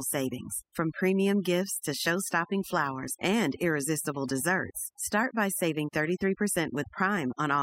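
Overdone noise removal runs through the whole speech clip: bands near the estimated noise floor are cut hard, leaving twinkling specks in near-silence.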